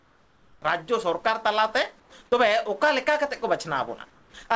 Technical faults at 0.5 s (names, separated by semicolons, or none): comfort noise in place of the background